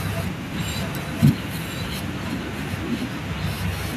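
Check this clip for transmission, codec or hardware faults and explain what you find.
One fault, an echo leak from 0.65 s to the end: a copy of the speech returns about 1.03 s later, roughly 10 dB quieter, likely from a far-end loudspeaker whose echo canceller let it through. Unlike room reverb, the repeat is distinct rather than smeared.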